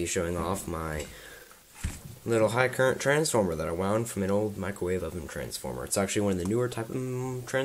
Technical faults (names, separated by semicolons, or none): none